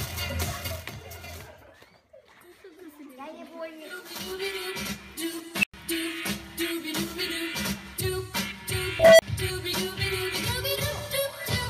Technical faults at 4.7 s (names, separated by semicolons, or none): none